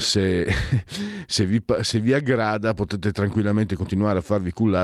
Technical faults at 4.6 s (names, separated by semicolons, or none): none